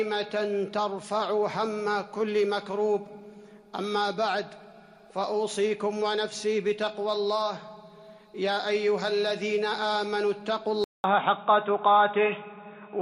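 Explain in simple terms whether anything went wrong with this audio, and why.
Something went wrong near the end. At 10.84 s the sound cuts out for 0.2 s. Then it turns dull and boxy, with nothing above 3.8 kHz, a slight level shift and a different faint hiss. This was likely an input switched to a poorer device.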